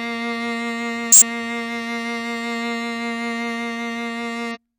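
A brief glitch breaks into the music at 1.12 to 1.22 s, and a shorter one follows at 4.51 to 4.57 s. Both come from damaged data in a compressed stream: some bytes in the coded file were corrupted, so the decoder misread those frames, lost its place in the bitstream and had to hunt for the next valid frame header before it could rebuild clean audio.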